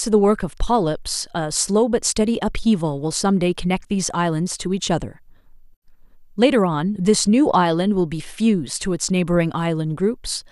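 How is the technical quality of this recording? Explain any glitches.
No audible glitches or faults.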